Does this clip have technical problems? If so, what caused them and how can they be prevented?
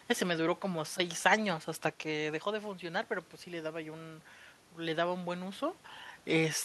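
Yes. Automatic gain rising runs from 2.47 to 5.70 s. After the talker moves back around 2 s and the input falls by about 10 dB, the gain control slowly adds about 4 dB. Voice and room noise swell together, seen as a rising waveform envelope and a brightening noise floor on a spectrogram. Setting a fixed gain, or keeping the talker at a steady distance, would prevent it.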